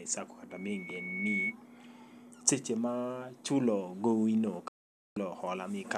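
From 0.50 s to 1.55 s a thin, piercing tone near 2.2 kHz rises out of the speech, swelling over about a second until it roughly matches the speech in loudness. This is loudspeaker feedback squeal: the microphone was hearing the loudspeaker it fed, and at 2.2 kHz the round trip through that loop gave back more than it sent, so the tone kept reinforcing itself until the loop was broken.

At 4.68 s the speech cuts almost instantly to silence, with a fade of only about 3 ms, and stays silent until 5.17 s, a gap of 480 ms. This is a digital broadcast dropout. The receiver stopped getting usable data, or the data it got failed checking, so it muted until good data returned. A hole of that length fits roughly twenty lost frames, and the sound transmitted during the gap is gone for good.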